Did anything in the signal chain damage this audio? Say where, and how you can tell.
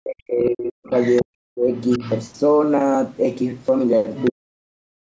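Yes. The speech dips hard from 0.0 to 0.92 s, again from 1.22 to 1.66 s, and from 4.31 s to the end, with the deepest drops around 40 dB. This is speech suppressed in double talk, introduced at the call-processing stage. The likely cause is the echo canceller failing to separate the near talker from loudspeaker echo while both sides spoke, so it attenuated everything rather than risk passing echo.

A second, fainter voice is audible underneath at 0.45 to 0.49 s, 0.87 to 1.24 s, 1.76 to 2.29 s and 4.16 to 4.31 s. The first scrap sits roughly 25 dB below the speech and the others roughly 15 dB below. This is the other side's voice leaking through, again from call processing. Most of the leaks sit inside or right against the suppressed stretches, which likely points to an echo canceller that left residual far-end sound from the loudspeaker in the microphone signal.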